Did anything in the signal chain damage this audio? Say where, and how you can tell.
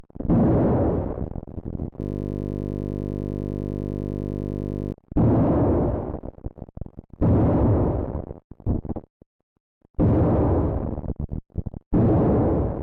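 Yes, a system hang loop at the driver or buffer stage: from 2.01 to 4.92 s one 20 ms slice repeats, buzzing at 50 Hz. The waveform shows identical cycles, and the spectrogram shows a 50 Hz harmonic comb.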